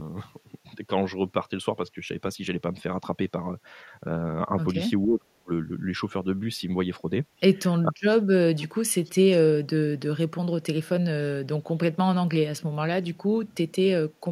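At 5.05 to 5.51 s and again at 7.87 to 8.42 s, the speech suddenly sinks almost to nothing for about half a second each time, dropping by something like 35 to 40 dB, with the deeper cut in the second stretch. This is speech suppressed in double talk: with both sides likely talking at once, the echo canceller could not tell this talker apart from its loudspeaker echo and turned everything down.

Shortly afterwards come two faint, brief ghosts of the speech, at 8.58 to 8.67 s and at 9.05 to 9.1 s. These are echo leak. The first sits about 25 dB below the speech and the second about 35 dB below, and both trail the original by 471 ms. One side is likely playing the call on a loudspeaker, and its echo canceller let part of that pickup through, so a delayed scrap of the voice returns.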